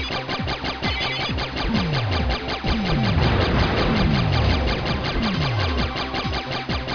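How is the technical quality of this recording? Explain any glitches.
Nothing stood out on listening; no glitches or technical problems could be heard anywhere in the recording.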